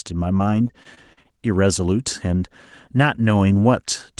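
From 0.37 to 1.32 s the speech breaks up with repeated packet loss, giving a robotic sound: seven short holes, the longest 39 ms, each patched by stretching the preceding sound, so about 15% of that stretch is synthetic fill and comes out choppy.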